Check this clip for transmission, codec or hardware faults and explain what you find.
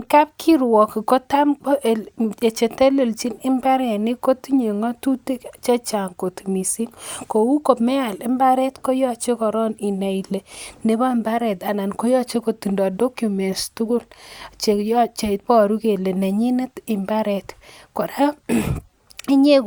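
No transmission, codec or hardware faults turn up in this clip.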